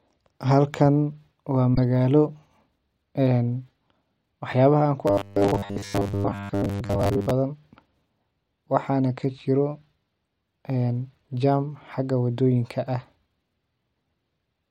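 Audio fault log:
1.75–1.78 s, corrupt frame decoded: a compressed frame arrived with flipped bits and was decoded anyway, across what sounds like a couple of frames. The misread gains and codes spray energy into wrong frequencies, giving a brief chirp or burst of noise peaking around -10 dBFS.
5.07–7.31 s, robotic sound from repeated short buffers: right after "waax yabaha an ku", new audio likely arrived too slowly, so playback looped a 10 ms buffer while most of the real speech was skipped. Those repeats impose a rigid 100 Hz metallic buzz that only loosely tracks the speech.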